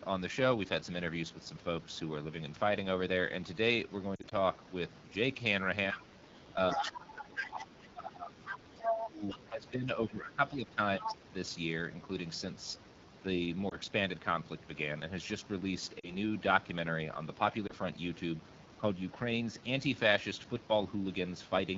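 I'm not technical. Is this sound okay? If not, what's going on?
No. The whole recording goes through the AMR wideband (HD Voice) codec at one of its lowest settings. That's the phone-call compression. It's what makes the voice sound rough and raspy all the way through. That roughness is steady, unlike the short breaks described below.

Lost AMR speech frames show up as brief warbles or dips at 4.15 to 4.34 s, 13.70 s, 16.00 to 16.15 s and 17.67 s. Small pieces of the signal went missing, and the phone filled the gaps by stretching the last good sound. So these are tiny smeared hiccups, not clean silences.

The other side's voice leaking through is a second voice heard in scraps. This likely comes from the talker's own loudspeaker, playing the other side, not being fully cancelled. It's brief at 5.92 and 7.82 s, and longer at 6.7 to 7.45 s and 10.99 to 11.15 s. From 8.46 to 9.38 s it's about as loud as the main talker.

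Speech suppressed in double talk happens when both people talk at once. The main voice drops lower or breaks into pieces, briefly around 5.92 to 6.04 s and on and off from 6.73 to 11.17 s. The likely cause is the echo canceller turning everything down at once. Unlike a lost frame, the voice sinks rather than warbles.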